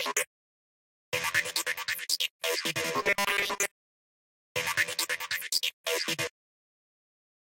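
From 3.02 to 4.18 s, fresh audio likely stopped arriving in time, so the playback kept looping a tiny stretch of the last buffer instead. This is robotic sound from repeated short buffers: most of the signal is replaced by repeats, imposing a rigid, metallic 200 Hz buzz, which fits a buffer of about 5 ms.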